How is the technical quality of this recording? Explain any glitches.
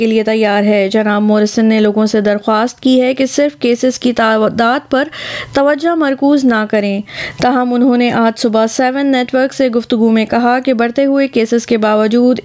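The recording has one fault that runs through the whole clip: gain pumping. The level seems to breathe in and out, with swings of roughly 10 dB. Loud and quiet passages sit unnaturally close together, giving a squashed, flattened quality. The likely cause is input gain set far too high, with a fast limiter or compressor clamping down on each peak and releasing in the gaps. The band tops out at 8 kHz, as expected from call microphone processing.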